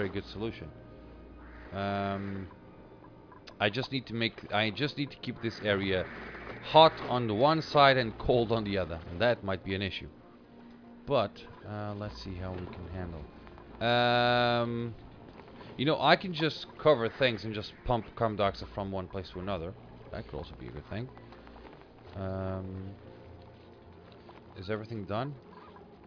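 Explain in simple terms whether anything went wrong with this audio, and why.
Nothing went wrong here: no dropouts, glitches, distortion or timing problems turn up anywhere in the recording.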